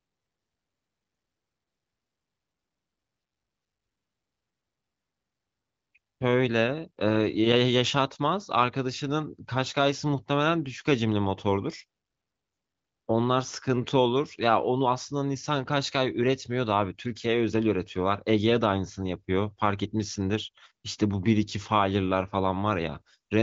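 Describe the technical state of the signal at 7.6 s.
At 7.6 s the speech is intact, with no fault to be heard, and the AMR wideband (HD Voice) codec at 23.05 kbit/s leaves nothing above 7.5 kHz.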